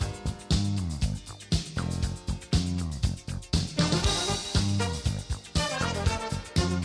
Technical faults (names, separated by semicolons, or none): none